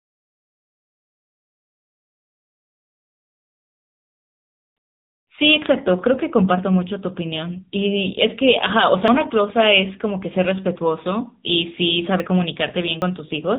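Speech that's gone through the AMR narrowband mobile codec the whole way: nothing gets past 4 kHz, and the voice has that buzzy, plainly synthetic edge you get from a low mode, which fits AMR-NB at about 7.95 kbps. Then there are three little jumps in the speech at 9.08, 12.2 and 13.02 s. Each skips a short chunk, around 40 ms, 70 ms and 40 ms, and they're likely dropped buffers from an overrun, where a piece of audio got overwritten before it was read and the two sides were spliced together.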